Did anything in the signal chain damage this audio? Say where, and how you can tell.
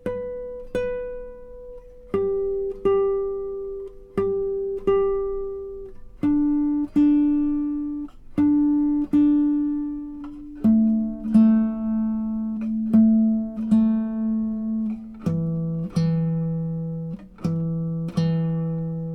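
No, nothing in the signal chain has left an audible mark on this audio. At no point can any stage be heard altering the sound.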